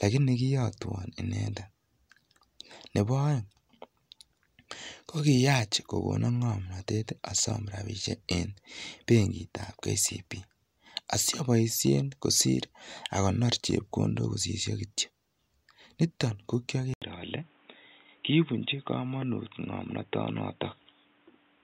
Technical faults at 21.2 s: input switched to a poorer device

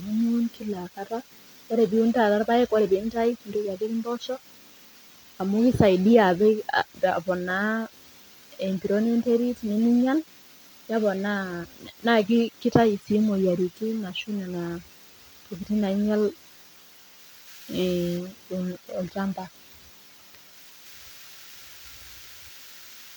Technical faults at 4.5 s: none

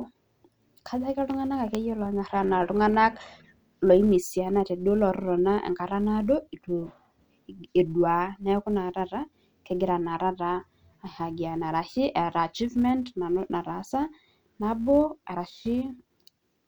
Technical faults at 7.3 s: filter restarted on every block

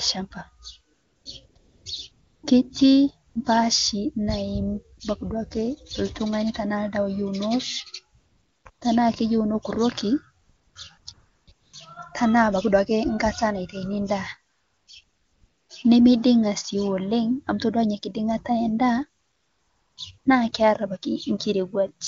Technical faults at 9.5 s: none

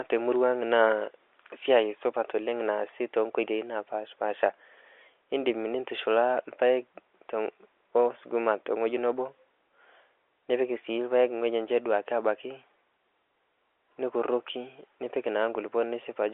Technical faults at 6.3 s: none

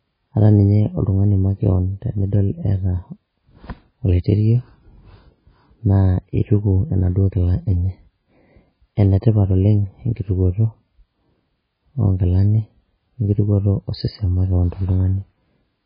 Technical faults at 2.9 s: MP3 compression

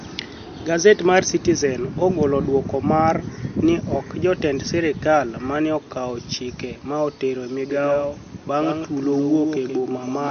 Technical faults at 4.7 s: MP3 compression

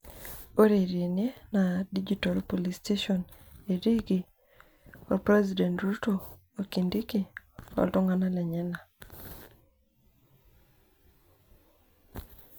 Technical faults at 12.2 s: none

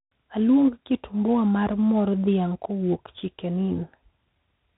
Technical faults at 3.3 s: 4-bit ADPCM compression

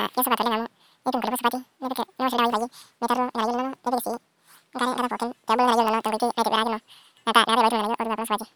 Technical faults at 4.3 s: audio read two samples at a time (double speed)

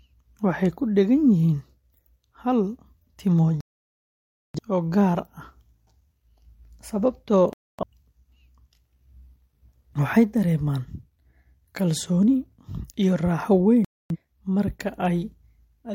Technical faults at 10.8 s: none

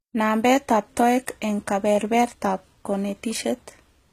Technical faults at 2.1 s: HE-AAC compression

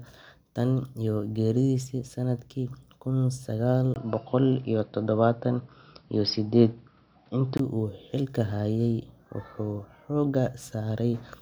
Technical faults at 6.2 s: input switched to a poorer device

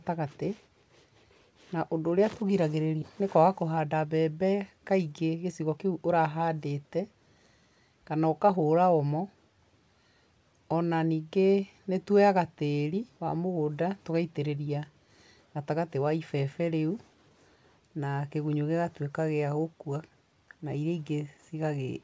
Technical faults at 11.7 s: none

